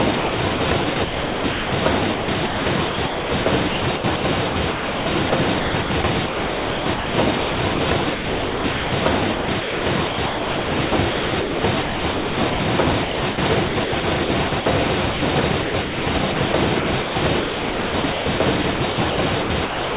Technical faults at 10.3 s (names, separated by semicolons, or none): sound chopped by the voice detector